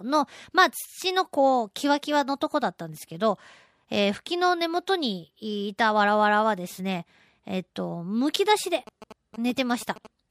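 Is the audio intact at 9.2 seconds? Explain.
No. From 8.87 to 10.07 s, the speech carries GSM signalling bursts. A nearby 2G phone is exchanging short control transmissions, and the audio circuitry rectifies that radio energy into sound. The result is a galloping dit-dit-dit of short buzzes repeating at about 217 Hz, sitting roughly 15 dB under the speech. Mains hum is continuous and sits at 50 or 60 Hz, while this buzz comes in stuttering groups and starts and stops abruptly.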